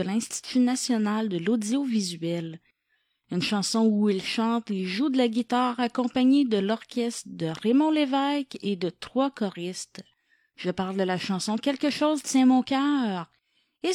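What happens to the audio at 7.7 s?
Nothing goes wrong at 7.7 s; the speech carries on intact through that moment, with no dropout, click or distortion to be heard.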